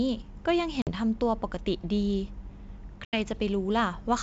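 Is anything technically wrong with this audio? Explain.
Yes. The speech has two breaks from packet loss on an ADPCM call. The first is at about 0.82 to 0.90 s, with roughly 50 ms of audio missing. The second is at about 3.05 to 3.18 s, with roughly 80 ms missing. Each gap is a hard-edged silence. Because the ADPCM decoder's predictor and step size have drifted from the sender's, the sound returns with brief, slight distortion that settles within tens of milliseconds. That recovery transient sets this apart from a clean dropout.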